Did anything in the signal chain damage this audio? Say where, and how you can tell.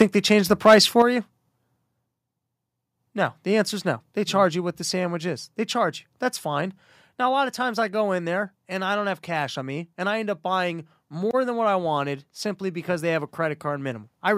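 Yes. Microphone overload at the converter stage runs from 0.65 to 1.02 s, right after "they change the". The loudest syllables there take on a harsh, crackly edge. The input was driven about 6 dB past full scale, so the waveform tops were flattened against the converter's limit on a few percent of samples. The likely cause is the microphone's input volume being set too high for the level of the talker.

Microphone volume stepped down occurs three times, at 0.02 s just before "they change the", at 1.02 s immediately after the clipped passage, and at 4.71 s between "charge you" and "the sandwich is". Each time, the level drops abruptly in a single step, by about 4, 7 and 2 dB respectively. This is likely call-processing gain control lowering the device's input volume on detecting excessive level, most clearly in response to the overload just before it.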